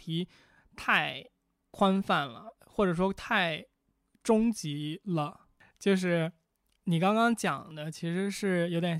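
Speech with overlap between stream segments: at 1.74 s and 7.71 s roughly 15 and 10 ms of audio is cut away, causing a tiny skip. Unlike a dropout, nothing falls silent; the waveform jumps forward where a 2-second segment boundary was trimmed.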